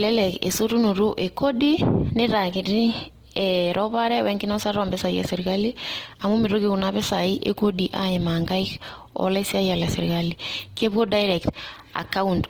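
All the way through, the speech has a rough, grainy texture, with voiced sounds going noisy rather than swirly. That's likely Opus compression in its music mode, at a rate that fits about 16 kbps, filling starved bands with folded or noise content.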